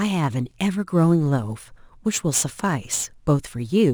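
A short speech clip with crude rate conversion running the whole way through. You get a gritty, inharmonic fizz riding on the louder and brighter parts of the voice, sitting about 25 dB below the speech itself. The samples were simply dropped or repeated to land on the new rate, with no filtering, which fits a 48 kHz to 44.1 kHz change. That leaves a repeating error pattern that throws off tones unrelated to the voice.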